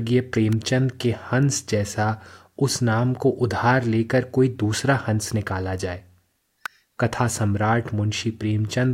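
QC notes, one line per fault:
0.53 s and 6.66 s, electrical switching spike: a nearby switch, motor or static discharge likely arced briefly, and the audio line picked up that burst of interference as an unwanted signal. Each event lasts only a few milliseconds and rides on top of the speech rather than replacing it, so it comes through as a sharp, dry snap peaking at about -15 dBFS.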